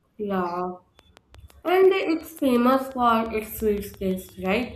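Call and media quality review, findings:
Train of clicks, 0.99–4.64 s: regular ticking at 5.8 per second, about twenty pulses near speech level, audible in pauses too. Likely nearby-equipment interference or a faulty connection or power supply. Spectrogram: evenly spaced thin vertical broadband lines. Waveform: near-identical narrow spikes.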